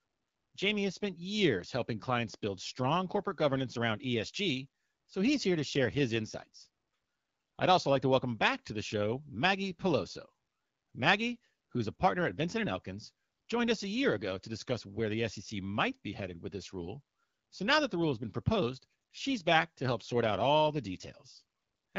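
Nothing goes wrong anywhere in this speech recording.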